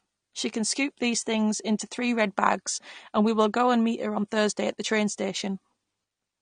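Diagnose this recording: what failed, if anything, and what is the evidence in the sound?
Codec stage: AAC compression throughout, likely AAC-LC, with nothing above 9.7 kHz, fitting about 32 kbps. Warbling, smeared sibilants set it apart from a clean low-pass filter.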